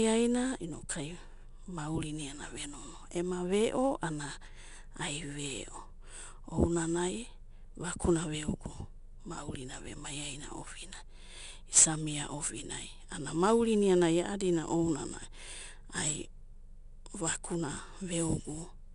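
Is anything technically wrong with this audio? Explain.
Yes. 4-bit ADPCM compression runs throughout: coarse predicted steps leave gritty hiss following loud speech, with nothing above 10.6 kHz.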